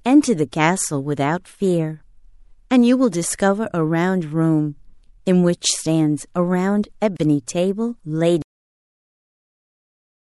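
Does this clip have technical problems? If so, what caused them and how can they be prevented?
Yes. Throughout the speech the sound has a watery, swirly quality, with chirpy sibilants and smeared onsets. This is likely MP3 compression, at a level of damage that fits a low bitrate around 64 kbps. Encoding at a higher bitrate or with a lossless format prevents it.

There is a gap at a join of encoded pieces from 7.17 to 7.20 s: a 31 ms silence with smeared edges, after which the sound resumes where it stopped. It comes from separately encoded segments keeping their encoder delay and end padding. Gapless encoding, or trimming delay and padding before joining, prevents it.

The clip has a cut-off end at 8.42 s. The sound stops mid-speech and drops straight to digital silence, with no decay, for the rest of the file. The final buffers were never written out. Flushing and closing the recording or encoding pipeline properly before finishing the file prevents it.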